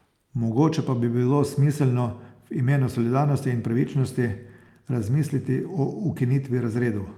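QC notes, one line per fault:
3.81–7.18 s, call bitrate drop: the encoder falls from 64 to 26 kbps, bottoming out for 2.8 s, so the speech is coded coarsely and sounds rougher.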